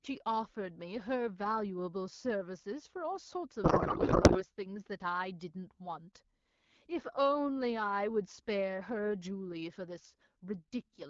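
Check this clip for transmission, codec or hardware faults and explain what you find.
There is one transmission fault. A codec payload misread from 3.64 to 4.43 s replaces the speech with garbled noise and warble. The sound points to octet-aligned AMR frames being unpacked as bandwidth-efficient, so the decoder reads fields in the wrong places.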